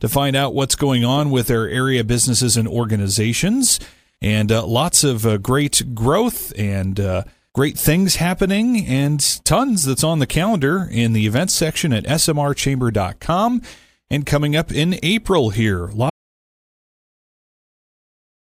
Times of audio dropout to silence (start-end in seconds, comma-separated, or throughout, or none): 16.10-18.50